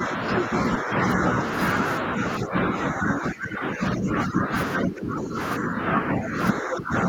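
Speech suppressed in double talk hits at 0–1.39 s, 2.01–4.54 s, 4.78–5.38 s, 5.59–6.37 s and 6.59 s to the end. The voice dips by somewhere around 5 to 15 dB, likely because the echo canceller couldn't separate it from the far end. At 3.14–3.18 s a short scrap of the other side's voice leaks through, roughly 10 dB under the speech, likely loudspeaker echo the canceller missed.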